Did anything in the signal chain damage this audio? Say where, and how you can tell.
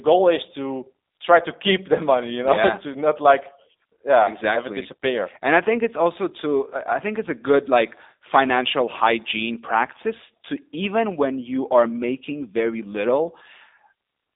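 Yes: codec stage, throughout. Nothing passes outside 250 Hz to 3.7 kHz, and speech sounds rough and synthetic, as G.729 rebuilds it from sparse pulses.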